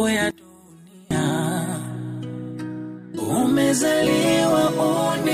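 From 0.31 to 1.11 s the sound collapses by about 24 dB to a faint residue, likely from one channel inverted so the shared content cancels in mono. The waveform shrinks sharply there.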